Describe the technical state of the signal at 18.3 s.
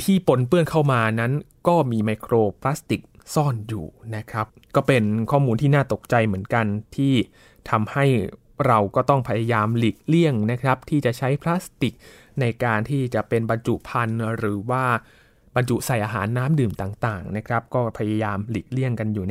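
At 18.3 s the speech signal is intact, with no fault audible at that moment.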